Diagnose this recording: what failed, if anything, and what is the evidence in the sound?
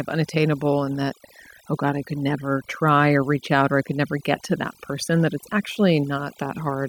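Overdone noise removal runs throughout the speech, a fault at the call-processing stage where a noise suppressor is set far too aggressively. Between phrases the background collapses to near silence scattered with twinkling specks. The suppressor pushes individual frequency bands down or shuts them off whenever their level sits near its noise estimate, so the quieter parts of the voice are removed along with the noise.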